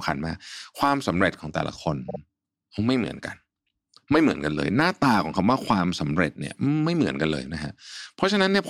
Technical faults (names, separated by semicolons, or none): repeated frames